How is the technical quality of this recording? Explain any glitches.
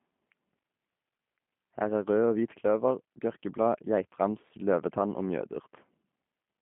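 The recording has audible low-bitrate codec coloration throughout the speech.

For the full length, the sound is narrow and slightly rough and buzzy, with nothing above 3.5 kHz and little below 150 Hz. This is G.729 codec damage, likely G.729A at a rate that fits 8 kbit/s. It rebuilds speech from a vocal tract model, pitch estimate and sparse pulses, so the result sounds synthetic rather than natural.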